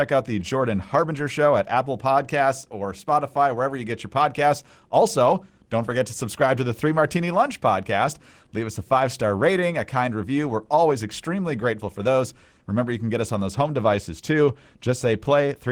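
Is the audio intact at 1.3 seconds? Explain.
Yes, the speech at 1.3 seconds is intact, with no dropout, glitch, distortion or other fault audible at that point.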